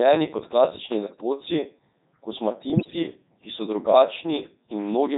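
Throughout, the speech passes through the Codec 2 vocoder, and the damage is heavy. Only pitch, voicing, energy and a spectral outline survive, and sine waves rebuild the voice. It sounds robotic and buzzy. The sparse detail fits the 3.2 kbit/s mode.

From 2.70 to 2.96 s, just before "ki so", bit errors on digital voice radio strike. A few percent of the bits flipped, corrupting the frame parameters. Pitch, level and tone colour lurch. The voice breaks into warbling, bleeping gibberish.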